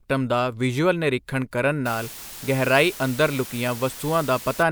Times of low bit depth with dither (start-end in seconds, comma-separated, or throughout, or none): 1.86-4.63